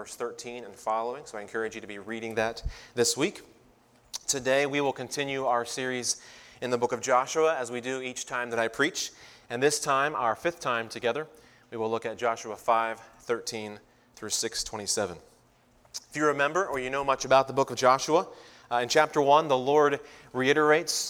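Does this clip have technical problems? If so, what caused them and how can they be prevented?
No, nothing here points to a technical problem, so there's no cause to track down and nothing you need to do differently to prevent one.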